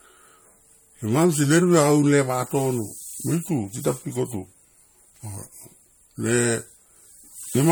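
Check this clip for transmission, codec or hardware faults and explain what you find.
One fault runs through the whole clip: transcoding between lossy codecs. The sound points to two encodes in a row, AAC-LC and then MP3, each at a rate that fits about 64 kbit/s, which is likely the cause. The second encoder spends its bits re-encoding the first one's errors while adding its own. Nothing is heard above 19.4 kHz, and the speech carries two overlapping layers of codec artefacts.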